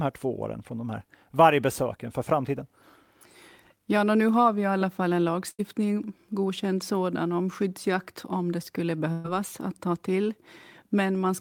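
At 5.49 to 5.61 s and again at 9.13 to 9.26 s, a burst of packet loss drops about 100 and 120 ms of speech. The receiver stretches the last sound into a fading buzz or hiss, seen as a frozen, flat spectrum and a decaying envelope before the speech jumps ahead.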